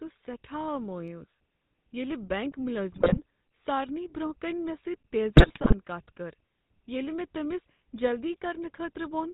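Across the whole recording the speech has a buzzy, gravelly roughness and nothing above 4 kHz, the mark of the GSM full-rate codec, which fits a 13 kbps stream. It rebuilds the voice from a vocal-tract model excited by sparse, regularly spaced pulses, so fine detail is lost and a harsh grain remains.

From 2.92 to 3.19 s, just after "ییلِہ بینک", the voice breaks into squawks and gargling pops. These are GSM bit errors at a rate near 3 percent. Corrupted filter, pitch and gain values distort the spectrum and spike the level across a run of frames. The same damage returns from 5.36 to 5.74 s, just before "کتھ کٔر", this time over a somewhat longer stretch of frames.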